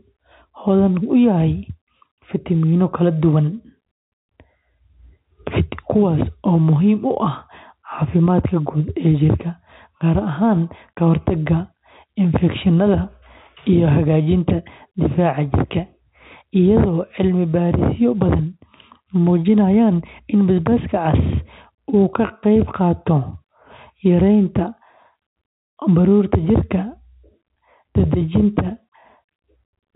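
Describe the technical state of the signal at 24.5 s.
At 24.5 s the speech is intact, carried through ordinary G.711 telephone coding with its band ending around 3.9 kHz.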